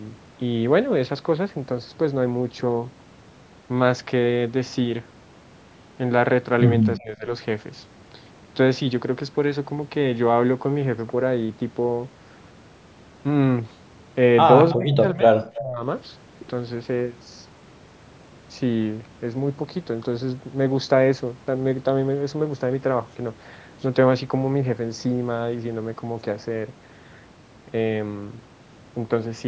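From 6.98 to 7.28 s, the echo canceller likely failed to separate the local talker from loudspeaker echo while both sides spoke, so it pulled the voice down. This speech suppressed in double talk dips the voice by roughly 20 dB for about 0.3 s.

At 14.71 to 14.76 s, some loudspeaker pickup likely escaped cancellation. This echo leak sends back a brief, faint copy about 15 dB below the speech, delayed 324 ms. The voice is then suppressed again from 14.76 to 15.85 s, dropping by about 20 dB across roughly 0.7 s in pieces. A second short echo scrap slips through at 15.54 to 15.62 s.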